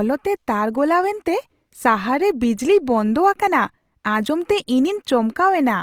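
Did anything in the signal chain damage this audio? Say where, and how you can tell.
Yes, at the codec stage, and across the whole clip. The speech has a rough, grainy texture with noisy upper bands rather than the swirling, holey sound of MP3. Bandwidth stays full, reaching about 20.2 kHz, so this is not a low-pass or speech-mode narrowing. The likely cause is Opus compression in its music mode, which keeps each band's energy but fills starved bands with folded or noise content. The damage is plainly audible and fits a rate around 24 kbps.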